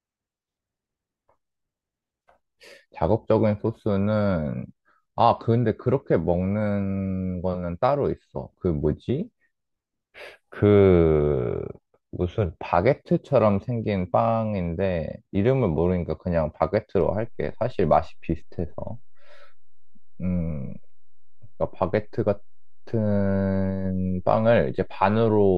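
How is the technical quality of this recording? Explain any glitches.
One fault stands out, a DC step. At 17.01 s the zero line of the waveform jumps and stays offset until the end of the speech. The jump is about -34 dBFS. It sounds like a sudden shift in the converter's baseline or an offset input being switched in. That instant change registers as a single low thump or click. After it, the speech continues unchanged. The offset itself makes no sound, but it does eat into headroom.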